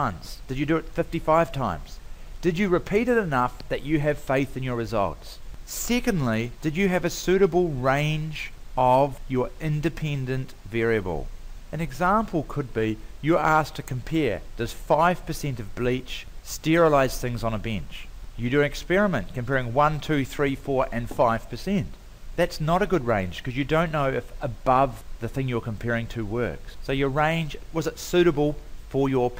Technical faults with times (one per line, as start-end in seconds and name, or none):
none